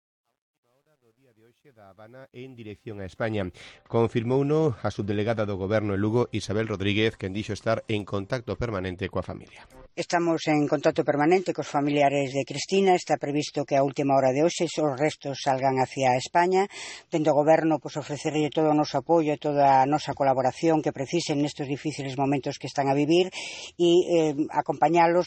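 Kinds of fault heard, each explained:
Truncation distortion on a fade: the fade-in at the start gets rounded to too few bits with no dither, which fits an 11-bit stage, so the quietest stretch, up to about 2.2 s, goes gritty before it cleans up by 3.6 s.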